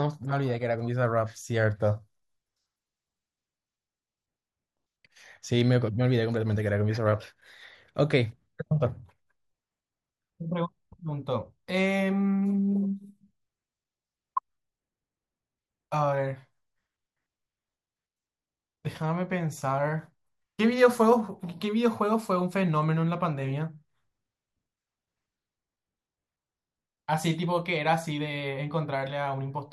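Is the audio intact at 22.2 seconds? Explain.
Yes, the speech at 22.2 seconds runs through cleanly with no dropout, click, distortion or other audible fault.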